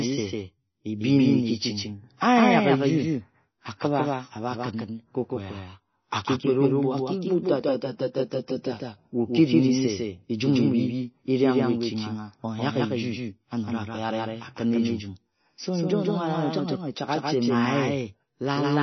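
From start to finish the speech has a second, equally loud copy trailing roughly 150 ms behind, a hard slapback with no room decay, likely a doubled audio track. Throughout, the sound is watery and swirly with nothing above 6 kHz, plainly audible MP3 compression, likely from a very low bitrate around 24 kbps.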